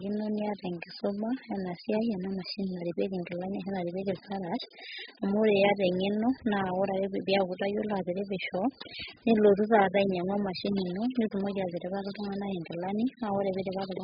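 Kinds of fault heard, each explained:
AAC compression: the speech sounds dull, smeared and warbly throughout, fizzy on sibilants. A spectrogram shows a hard ceiling at 5 kHz. The heavy damage is likely from AAC-LC at a bitrate near 8 kbps.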